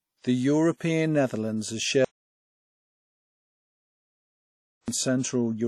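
Throughout, the speech rings and sounds washy, with hiss that breathes with the signal and nothing above 17.7 kHz, likely WMA compression at a bitrate that fits about 48 kbps. From 2.05 to 4.88 s, the speech cuts out for 2.83 s into total silence with no room tone. This is likely an audio dropout to silence, not a natural pause.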